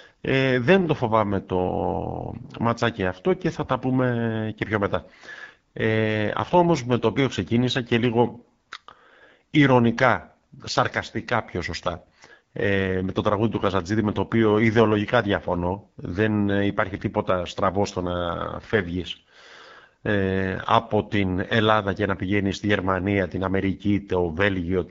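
Speech carried throughout by the AMR wideband (HD Voice) codec at one of its lowest modes, whose roughness fits the 8.85 kbit/s rate. Too few bits for the pulse-driven vocal tract model leave the voice plainly rough and raspy, with the top band above 6.4 kHz filled with shaped noise.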